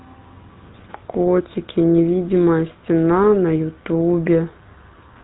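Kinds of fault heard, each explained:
GSM full-rate codec: The speech has passed through the original GSM mobile codec, which models the vocal tract as a filter and drives it with a coarse pulse excitation that keeps only every third sample. The result fits the 13 kbps full-rate mode. Throughout, a plainly audible buzzy, gravelly roughness sits on the speech. A spectrogram shows energy ending abruptly near 3.9 kHz with nothing above, and harmonics look smeared and grainy rather than cleanly striated.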